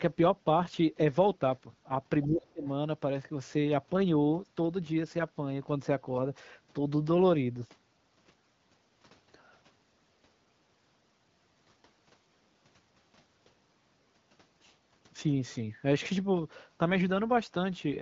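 At 2.22 s a faint second voice slips in under the speech for a brief moment, well below the talker's level. This is the other side's voice leaking through, likely loudspeaker echo that the echo canceller failed to fully remove from the microphone. From 2.26 to 2.64 s the speech itself sinks sharply, dropping deeply while the far side is active. That is speech suppressed in double talk: the canceller likely could not separate the talker from the echo and turned everything down. At 2.64 s, as the speech recovers, another brief scrap of the far voice leaks through before fading by 2.68 s.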